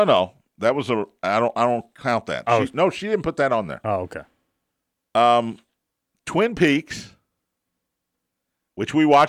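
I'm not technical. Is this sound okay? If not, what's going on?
No. From 6.33 to 7.12 seconds there is a block size mismatch (truncated). One part of the system sends chunks of audio slightly too long for the next part, so each chunk's end gets cut off. That chopping makes a steady 100 Hz buzz over the speech.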